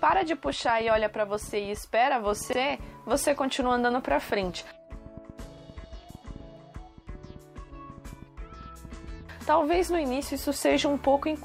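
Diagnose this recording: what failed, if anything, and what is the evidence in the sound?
A train of clicks runs from 0.1 s to 9.2 s: around fifty pulses at an irregular 5.8 per second, roughly as loud as the audio itself and audible in pauses too. The likely source is analogue wiring: interference from nearby equipment, or a faulty connection or power supply. A spectrogram shows thin broadband vertical lines, and the waveform shows repeated spikes of similar shape.

Overlapping chunks point to the driver or buffer stage. At 2.53, 5.58 and 8.63 s, a 50 ms piece plays twice. The joins fall at the boundaries of 3 s chunks, and each chunk begins before the previous one ends. On the waveform this appears as a duplicated segment with a discontinuity at each join, and the spectrogram shows a vertical line there.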